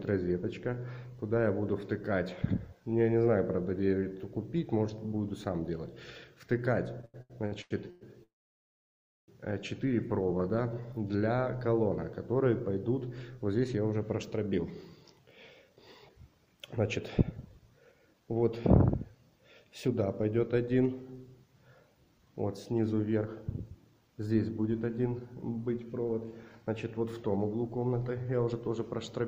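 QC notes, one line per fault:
7.01–8.03 s, repeated stalls (stutter): the sound halts six times in about a second, with the longest hold near 107 ms and roughly 438 ms of filler in total, so concealment fills about 43% of this stretch. Packets were arriving more slowly than playback consumed them, so the jitter buffer kept running dry and the receiver stretched the last sound each time. Nothing is lost, but the passage drags and stutters.
8.23–9.30 s, call audio freeze: the audio stops for about 1.05 s. A brief continuation of the preceding sound decays into about 0.99 s of silence, then playback resumes exactly where it left off. The likely cause is packets held up in transit, which emptied the jitter buffer. The whole wait is inserted as a gap and adds about 1.05 s of delay, with no content missing.
10.26–11.37 s, jitter buffer slow-down: playback runs at about 88% speed with the pitch unchanged. 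About 145 ms is added by repeating single pitch periods and fragments of pauses many times over, which draws sounds out and can leave a faint warble. The buffer was low or had just raised its target delay, so the receiver stretched the audio to rebuild a reserve.
13.94–18.43 s, 19.15–19.89 s, 21.95–23.26 s and 23.94–29.21 s, jitter buffer speed-up: the audio runs fast at the same pitch, at about 107%, 105%, 108% and 107% respectively. Roughly 0.3 s, 40 ms, 0.1 s and 0.4 s are cut by removing short pitch-period pieces in rapid succession. The buffer held more audio than its target, as happens after delayed packets arrive in a burst, so the receiver trimmed audio to bring latency back down. This gives the passages a hurried feel.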